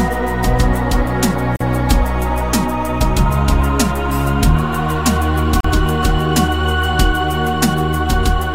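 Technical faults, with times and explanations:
1.56–1.60 s and 5.60–5.64 s: gap at a join of encoded pieces. The continuous sound drops into silence for about 44 ms and then about 40 ms, spaced 4.0 s apart, with edges smeared by the codec, before resuming where it stopped. The audio was encoded as separate segments and concatenated untrimmed, so each segment's encoder start-up delay and final-frame padding remain as dead air at every boundary.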